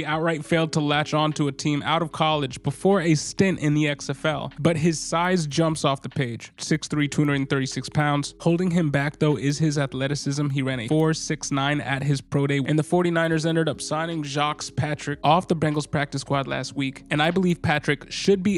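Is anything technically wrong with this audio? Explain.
Yes. From 5.0 s to the end, a resampler restarted on every block leaves a small error at each 250 ms block edge. Regular ticks at 4.0 Hz sound only while signal plays, during a 24 kHz to 48 kHz conversion. Unlike dropouts, nothing goes missing.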